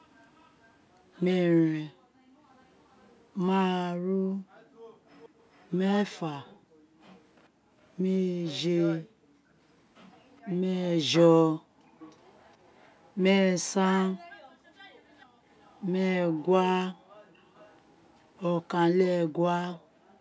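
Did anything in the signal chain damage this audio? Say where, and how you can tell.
Yes. At the call-processing stage, an echo leak shows up from 0.15 to 7.47 s and from 11.99 to 18.24 s. A faint copy of the speech trails it by 414 ms, about 30 dB down. On a spectrogram this appears as ghost harmonics offset in time. The likely cause is a speakerphone echo canceller that let residual pickup through.

The background is also gated by the echo canceller from 1.94 s to the end. The room sound repeatedly dips by as much as about 40 dB, for roughly 5 s in total. The waveform shows the noise floor collapsing into near-silent holes and then snapping back. The spectrogram, which has no content above 8 kHz, shows matching vertical gaps.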